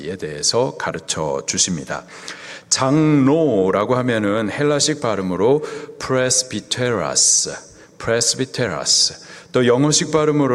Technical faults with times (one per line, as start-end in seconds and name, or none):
0.00-10.54 clock drift between sender and receiver
0.22-10.16 repeated timing corrections